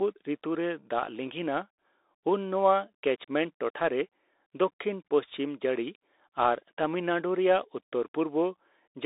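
Throughout, a Bluetooth CVSD headset codec codes the speech in one-bit steps, confining it to 300 Hz to 3.7 kHz, so s sounds turn scratchy over a granular hiss.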